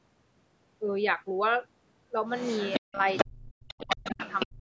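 From 2.31 to 2.8 s a second voice runs beneath the speech, around 10 dB quieter. This is the other side's voice leaking through, likely because the far end's audio played from the talker's loudspeaker reached the microphone and the echo canceller left part of it behind. The leak comes back at 3.08 to 3.28 s, now about as loud as the speech, and again from 3.68 to 4.47 s, a few dB below it. On a spectrogram this shows as a second set of harmonic stripes overlapping the talker's own, with a pitch track that does not line up with theirs. Like the rest of the band, it stops below 8 kHz, the normal ceiling of the call's microphone path.

Between and overlapping these stretches the talker's speech is speech suppressed in double talk, likely the echo canceller turning everything down when it could not separate the two voices. The talker drops by as much as about 40 dB at 2.8 to 3.01 s, over roughly a fifth of a second. 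It happens again from 3.29 to 4.21 s, with about 0.7 s affected in patches, and once more from 4.46 s to the end. On the waveform the envelope collapses into near-flat gaps or choppy fragments. On a spectrogram the talker's harmonics fade or vanish in blocks, often losing the upper frequencies first.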